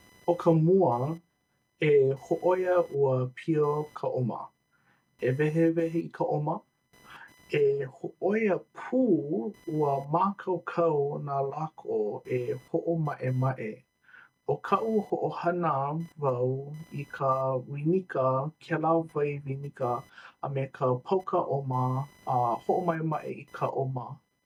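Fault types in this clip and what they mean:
Computer activity noise: present throughout the speech, a faint buzzing pulse repeating at roughly 1 kHz, sitting around 35 dB below the speech level. It comes from the computer's own workload, as processor, graphics or mouse activity shifts current through the ground shared with the audio circuit. That ground movement leaks into the signal as a chirping, scratchy buzz that follows the machine's activity rather than anything in the speech itself.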